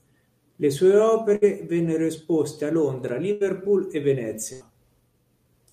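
At 1.35 to 1.45 s comes the first burst of packet loss. Audio stopped arriving, and the receiver bridged roughly 63 ms by extending the last sound and fading it, so a buzz or hiss stands in for the speech. About 40 ms of the original is skipped when playback resumes, and the timing shifts by about 23 ms.

At 3.08 s a block of digital silence about 3 ms long drops the signal straight to zero and back. The output buffer was likely not filled in time, and the gap length fits a 128-sample block. The hard edges make it a sharp tick rather than an audible hole.

Two more packet-loss bursts follow, at 3.32 to 3.43 s and 4.53 to 4.72 s. Each is concealed with roughly 80 to 90 ms of stretched, decaying sound, and about 80 ms of speech goes missing in each. Playback lands a few milliseconds later afterward.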